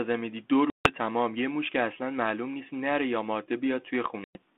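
At 0.70 s and again at 4.24 s the speech drops out, a case of packet loss on an ADPCM call. Flat silence fills 150 ms and then 110 ms, which fits runs of roughly fifteen and ten short packets. Because the decoder's adaptive predictor and step size drift from the sender's during each gap, the audio comes back slightly distorted, resettling by 0.94 s and 4.36 s. A waveform shows flatlines with abrupt edges. A spectrogram shows blank vertical bands within a 200 to 3600 Hz telephone band consistent with 32 kbit/s G.726.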